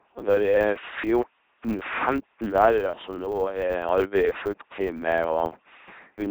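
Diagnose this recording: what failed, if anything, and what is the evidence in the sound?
The codec stage failed: the speech has passed through an LPC-10 vocoder at 2.4 kbit/s, giving a buzzing, robotic voice throughout with heavy damage. A spectrogram shows evenly spaced pulse-train harmonics in voiced stretches, and flat noise in unvoiced ones.

A block-processing stage shows a filter restarted on every block: each block starts from empty filter state, so a small transient marks every boundary, heard throughout as a 100 Hz buzz that tracks the speech level. The waveform would show regularly spaced spikes every 10 ms, which points to a 10 ms block.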